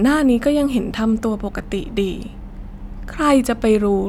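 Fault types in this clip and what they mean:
No technical faults can be heard in this speech clip. Nothing in the audio calls for a fault entry here.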